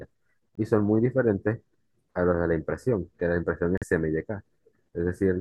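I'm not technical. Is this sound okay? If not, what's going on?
No. The speech drops to dead silence twice, from 0.55 to 0.58 s and from 3.78 to 3.84 s. This is a corrupt frame muted fault. A couple of damaged chunks of the compressed audio were rejected, and the player filled each gap with silence.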